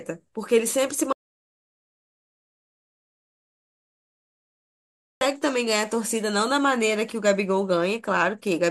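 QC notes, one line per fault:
1.13 to 5.21 s, audio dropout to silence: the speech cuts off mid-flow and about 4.1 s of silence follows, with no room tone or noise floor at all, unlike a quiet pause. The input was likely lost while writing continued, so that stretch is gone.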